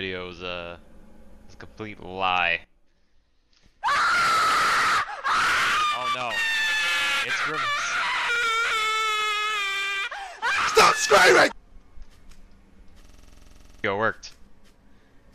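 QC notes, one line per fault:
13.05–13.84 s: system hang loop. One 46 ms slice repeats identically 17 times, a machine-gun stutter at 21.5 Hz, which fits a 2048-sample ring buffer cycling during a stall. About 0.7 s of audio is lost. Unlike packet-loss concealment, the repeats never fade or smear.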